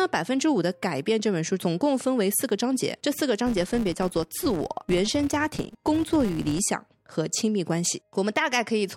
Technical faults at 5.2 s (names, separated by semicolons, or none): filter restarted on every block